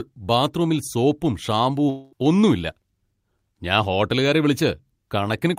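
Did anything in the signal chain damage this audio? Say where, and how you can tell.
Yes, most likely at the network stage. Right after "ബാത്റൂമിൽ സോപ്പും" the speech smears into a fading buzz from 1.89 to 2.14 s, then picks up at "ഒന്നും ഇല്ല" with about 220 ms gone. That's a long network dropout, with the receiver stretching the last sound to cover the gap.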